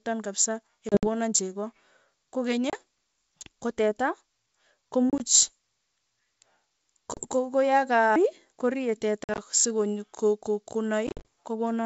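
Packet loss on an ADPCM call: dropped packets at 0.89–1.07, 2.70–2.75, 5.10–5.24, 7.14–7.25, 9.24–9.39 and 11.07–11.25 s desynchronise the decoder's predictor, leaving abrupt silent gaps and briefly, slightly distorted speech afterwards.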